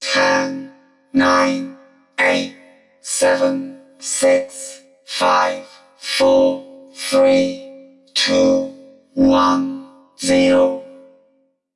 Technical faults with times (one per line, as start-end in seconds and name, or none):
none